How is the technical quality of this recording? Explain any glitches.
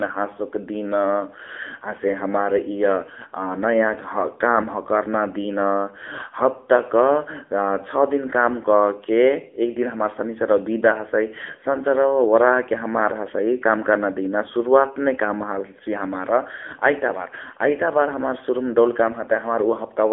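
The whole recording has been squeezed through an AMR narrowband mobile codec, so it sounds like a phone call rather than a studio capture. From start to finish the speech sits in a telephone band of roughly 300 Hz to 3.5 kHz, with nothing at all above about 3.7 kHz. AMR-NB samples at 8 kHz and rebuilds the voice from a vocal-tract model fed by 2 to 10 pulses in each 5 ms. The damage is plainly audible: a buzzy, synthetic edge that points to one of the lower bitrate modes, roughly 8 kbps.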